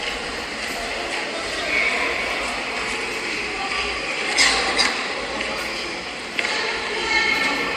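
Sound recording with no technical faults audible at any point.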